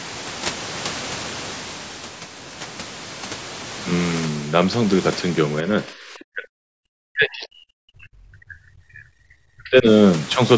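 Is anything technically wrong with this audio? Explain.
Yes. From 5.63 to 9.86 s there is speech suppressed in double talk. The likely cause is that both ends of the call were talking at once, and the echo canceller could not tell this talker apart from the loudspeaker echo it was trying to remove, so it attenuated everything. Across roughly four seconds the voice sinks, at its deepest by around 40 dB. The high-frequency detail is already capped near 8 kHz by the call's microphone processing.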